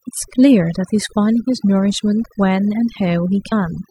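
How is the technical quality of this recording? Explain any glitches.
The technical quality is poor, with one processing fault running through the whole recording and one brief glitch near the end.

Throughout, the gaps between phrases fall to an unnaturally dead hush flecked with twinkling specks. That is overdone noise removal. A noise reduction stage was pushed far too hard, so it cut individual frequency bands down or out whenever they sat close to its noise estimate. The quieter parts of the speech were removed along with the noise, and the isolated bands left switching on and off produce the twinkle.

From 3.48 to 3.53 s there is a short glitch lasting about 50 ms. That is damaged data in a compressed stream. A stretch of the encoded file was corrupted, so the decoder misread those frames, lost its place and searched for the next valid frame header. The garbled output is what comes through as that glitch.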